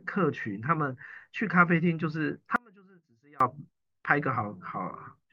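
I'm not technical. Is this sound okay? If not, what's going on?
No. From 2.56 to 3.40 s the speech suddenly drops to a faint trace, an audio dropout to a faint residue, likely a brief break in the signal path.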